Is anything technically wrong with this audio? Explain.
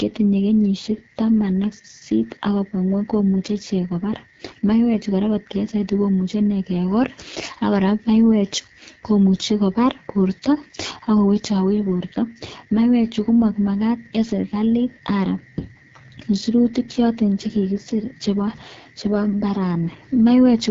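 Yes. The whole clip of speech carries AMR wideband (HD Voice) codec damage, and it is plainly audible. This codec models the vocal tract and drives it with pulses up to 6.4 kHz. Above that it substitutes shaped noise. Nothing is present above 7.7 kHz. The speech sounds rough and raspy throughout. That harshness points to one of the lowest AMR-WB rates, consistent with 8.85 kbit/s, where too few bits remain to code the excitation cleanly.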